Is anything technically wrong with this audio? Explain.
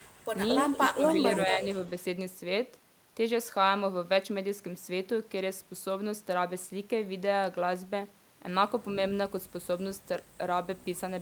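Yes. Within the first two seconds of this speech there are two faults.

Echo leak appears four times: 0.00 to 0.27 s, 0.51 to 0.89 s, 1.05 to 1.27 s and 1.43 to 2.04 s. Likely a loudspeaker on the far end fed its microphone, and that side's echo canceller let part of it pass. A delayed copy of the speech returns about 225 ms late. It is faint in the first stretch, about 35 dB down, and much plainer afterwards, about 10 dB below the speech.

Speech suppressed in double talk occurs between 0.91 and 1.18 s, overlapping the third echo burst. The echo canceller likely could not tell the talker from the returning echo while both were present, so it pulled the whole signal down. The speech dips by up to about 15 dB, in pieces adding up to roughly 150 ms, so it sounds briefly gated or hollowed out.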